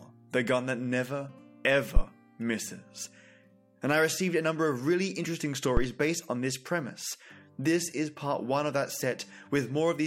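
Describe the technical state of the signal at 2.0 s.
A deep thump peaking near about -8 dBFS and dying away within 12 ms, from 1.97 to 2.02 s: a phantom power thump, from a supply step passing through the input's coupling capacitors.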